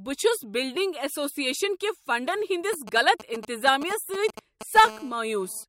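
GSM signalling bursts run from 2.73 to 4.78 s, starting just after "بلڈنگ ایسوسیشن کہ فنڈن". A 2G handset close to the recording chain is exchanging short control transmissions, and some stage of the audio circuit rectifies those radio pulses into audible current. The result is a galloping dit-dit-dit of brief buzzes pulsed at 217 Hz, sitting roughly ten decibels below the speech and breaking into the talk in irregular clusters.

GSM phone buzz follows from 4.85 to 5.64 s, when a handset in call mode transmits continuously in its 217-times-a-second burst pattern. Rectification of that steady pulse train produces an unbroken, hard, raspy tone at 217 Hz carrying a dense stack of harmonics, about 19 dB below the speech. It bears no relation to what is being said.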